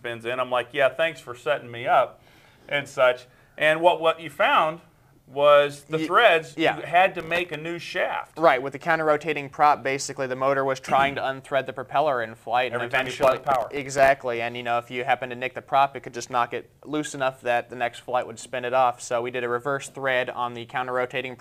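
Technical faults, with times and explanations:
7.20–7.54 s and 12.95–14.08 s, processor overload crackle: the processor falls behind and misses buffer deadlines many times in a row, likely with very short buffers of around 1.5 ms. Each miss drops in a tiny silent gap with hard edges, and dozens in quick succession produce gritty crackle that stops once the load eases.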